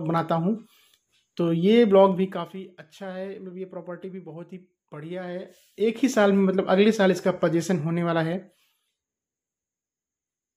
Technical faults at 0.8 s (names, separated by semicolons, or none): none